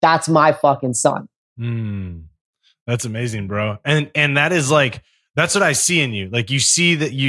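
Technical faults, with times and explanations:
No technical faults are audible in this speech recording.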